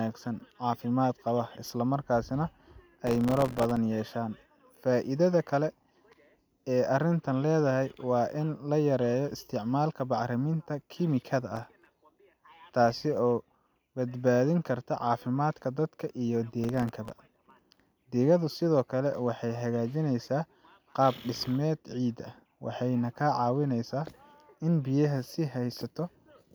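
Processor overload crackle occurs at 3.07–3.77 s, 11.56–11.95 s and 16.64–17.92 s. The processor repeatedly misses deadlines on very short buffers, around 1.5 ms each, leaving dozens of hard-edged silent gaps. These are heard as gritty crackling over the speech.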